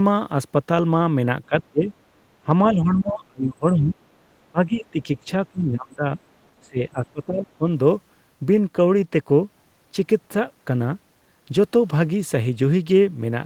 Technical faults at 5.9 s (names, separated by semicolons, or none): speech suppressed in double talk